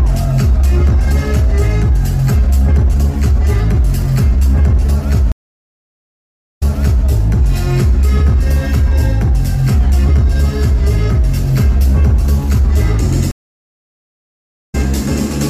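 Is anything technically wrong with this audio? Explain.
Yes, there are two stream reconnects. From 5.32 to 7.04 s the audio drops out for about 1.26 s and comes back 0.47 s earlier than where it stopped, so a short stretch repeats. From 13.31 to 14.75 s a 1.37 s silence ends with the audio picking up around 0.15 s later, so a little is skipped. Each time, the connection failed, the player fell silent, then reconnected and started a fresh decoder mid-stream. In the first case the server resent a burst of earlier audio; in the second it simply carried on live.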